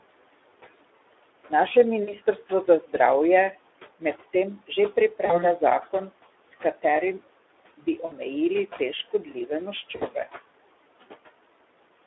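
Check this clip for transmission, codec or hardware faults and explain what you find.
Three faults run through this speech clip: noise suppression artifacts and Speex codec damage throughout, plus four short dropouts from concealed packet loss.

The noise suppressor artifacts are present throughout. The background falls away in the gaps between phrases and comes back under the talking. The suppressor estimates the steady room noise and turns down each frequency band it judges to be noise, frame by frame, here by about 18 dB. The room noise it works on sits about 18 dB under the speech.

Speex codec damage is plainly audible throughout. The voice sounds hoarse and noisy, and it is confined to a narrow telephone band of roughly 300 Hz to 3.6 kHz, with nothing bright above it. This comes from a CELP speech codec with too few bits to describe the excitation signal, which fits a Speex mode around 11 kbps. 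The coder rebuilds speech from a coarse pulse pattern, and that coarseness is what makes the voice rough.

VoIP packet loss concealed by the speech codec appears four times: at 2.03–2.15 s, 5.25–5.52 s, 8.05–8.13 s and 9.95–10.04 s. Each time the voice briefly stretches into a buzzy tone or coloured noise that fades. Afterwards it stays weak or distorted for a moment before recovering. The first two gaps fit about 40 ms of missing audio, and the last two fit about 60 ms. The decoder fills each gap by repeating its last pitch and filter at falling gain. Because each frame depends on the previous one, the damage carries on past the point where packets resume.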